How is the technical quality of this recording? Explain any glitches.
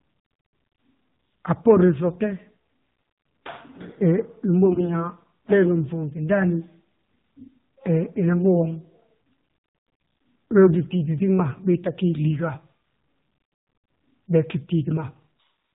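The technical quality is poor: the whole recording has plainly audible narrowband mobile-codec damage, and one short stretch is further corrupted by transmission errors.

Throughout, the speech sounds muffled, buzzy and synthetic, with nothing above 4 kHz. This is the AMR narrowband mobile codec, and the plainly audible artefacts point to a low mode, which fits 7.4 kbps. The codec rebuilds speech from a vocal-tract model excited by sparse pulses, so detail is lost.

From 4.66 to 4.95 s the speech turns hoarse, scratchy and gargly while roughly keeping its pitch and loudness. These are AMR bit errors. A few percent of the weakly protected bits arrived flipped, which misplaced the excitation pulses and skewed the finer gain and spectral values across a run of frames.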